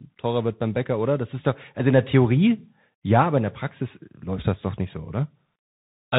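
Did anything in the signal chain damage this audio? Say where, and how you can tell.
Yes. Throughout the speech the top end stops near 4 kHz, s sounds turn scratchy, loud bright passages distort, and a granular hiss sits underneath. That is the Bluetooth CVSD headset codec, which fits a 64 kbps one-bit stream whose adaptive step cannot keep up with fast, loud changes.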